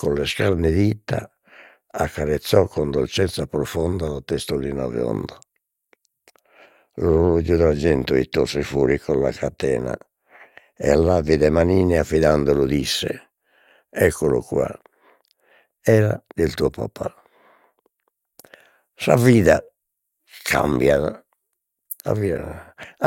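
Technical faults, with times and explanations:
Nothing technical stands out here; the speech comes across steady and intact the whole way, with no faults to list.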